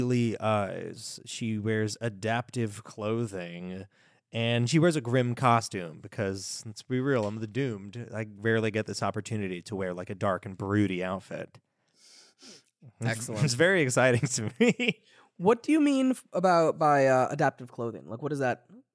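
Speech recording, no technical faults detected.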